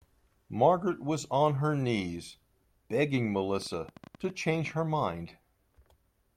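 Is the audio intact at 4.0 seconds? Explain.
No. From 3.62 to 4.72 s a train of clicks, about fifteen uneven pops near speech level, ticks over the sound, likely from interference or a faulty connection.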